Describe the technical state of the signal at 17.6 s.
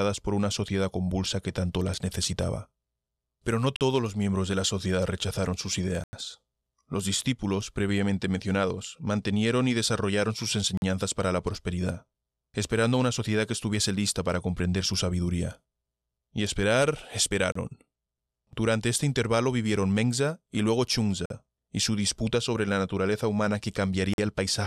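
A short hole from 17.52 to 17.55 s: a block of digital silence about 33 ms long. The samples there drop abruptly to silence and return with no fade, likely because the output buffer wasn't filled in time, so the speech briefly vanishes.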